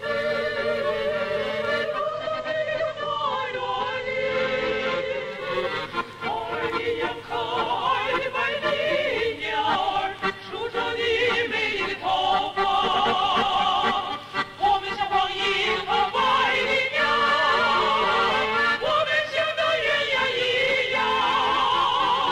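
A filter restarted on every block runs through the whole clip. It loses its state at each block boundary and starts from silence, so every block opens with a small transient. The result is a buzz at 375 Hz that rises and falls with the level, which fits a 128-sample block.

From 1.76 to 5.57 s the sound shows a digital radio blending to analogue. The receiver lost the digital stream and cross-faded over about 443 ms to the FM broadcast. The level drops by about 2 dB, and hiss rises to roughly 35 dB below the signal.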